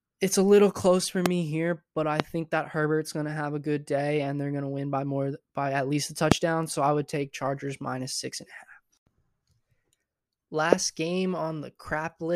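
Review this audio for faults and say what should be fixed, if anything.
Four loud pops cut sharply through the speech, each a single hard click about 20 ms long and far louder than the voice, which carries on underneath: at 1.26–1.28 s after "a little close for", at 2.20–2.22 s after "here but I", at 6.32–6.34 s after "by at least a", and at 10.73–10.75 s. The likely cause is a brief voltage pulse from a switch, static discharge or driver glitch entering the signal chain. To prevent this, secure the connectors, ground the equipment properly, and keep switches untouched while recording.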